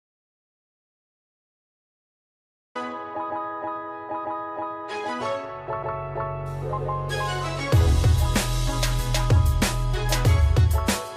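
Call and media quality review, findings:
Audio dropout to silence, 0.00 to 2.75 s: clip opens in silence, no room tone at all. Sound then cuts in abruptly mid-flow, so the gap was under way before capture began. Likely an input-side loss, such as an unplugged device, a dropped link or a stray mute, with the recorder writing silence. Whatever played during the gap is gone.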